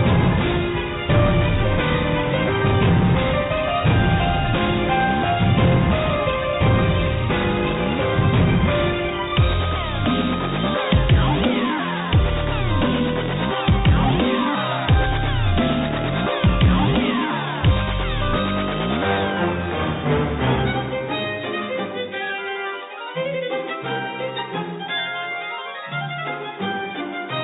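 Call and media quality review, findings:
No faults found; the audio passes through the WebRTC call path as expected, band-limited with nothing above 4 kHz, which fits narrowband G.711 A-law telephony coding.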